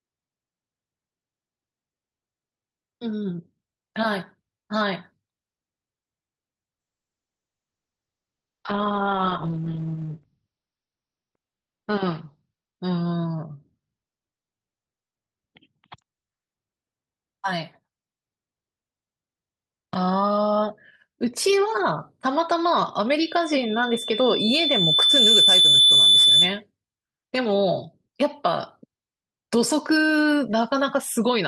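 Call bitrate drop, 6.8 to 16.53 s: the call's bandwidth estimate fell, so the Opus encoder was forced to spend far fewer bits on the speech. The sound turns coarse and watery, and the top end closes in from 20 kHz down to about 6 kHz, leaving the speech muffled. This fits a fall from 40 kbps to around 8 kbps, with the worst stretch lasting about 3.3 s before quality recovers.

Loudspeaker feedback squeal, 23.19 to 26.61 s: the microphone is picking up the loudspeaker it feeds, and at 3.5 kHz the loop gain exceeds one, so that frequency feeds on itself. A single piercing tone at 3.5 kHz swells over roughly two seconds until it stands around 10 dB above the speech, then persists as a steady squeal until it stops.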